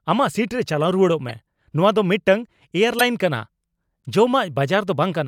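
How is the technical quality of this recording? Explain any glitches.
The speech is marred by three brief glitches, each a corrupt frame decoded. At 1.29 to 1.31 s, just before "ᱱᱚᱶᱟ ᱫᱚ", at 2.99 to 3.01 s, and at 4.04 to 4.06 s, damaged bits in roughly two compressed frames were decoded anyway. Misread gains put energy at wrong frequencies, producing a short chirp-like burst. The burst is moderately loud at first, loud near 3 s and faint near 4 s. Unlike a dropped frame, which leaves a gap or smoothed-over fill, this adds spurious sound.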